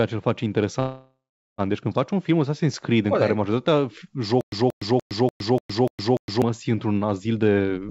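Right after "ce îl face", from 0.80 to 1.61 s, there is a call audio freeze, likely from packets held up while the jitter buffer ran dry. The last sound is stretched into a fading buzz or hiss that ends in about 420 ms of silence. The speech then resumes exactly where it stopped, so nothing is lost, just delayed by about 0.78 s. That resumption, rather than a skip, separates it from a dropout.

After "în care majoritatea", from 4.41 to 6.42 s, a stutter with silent gaps sets in, likely a stalled stream retrying. The same 181 ms fragment repeats 7 times, each followed by 112 ms of digital silence, on an even 293 ms cycle. Unlike the freeze, nothing fades and the speech belonging to that stretch never returns.

From 7.20 s to the end, a jitter buffer speed-up trims small pitch-period pieces in quick succession to shed roughly 0.3 s of backlog. Speech runs at 146% speed and sounds clearly rushed, yet the pitch stays unchanged, which rules out a simple faster playback. 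The audio passed through a wideband call codec, with nothing above 8 kHz.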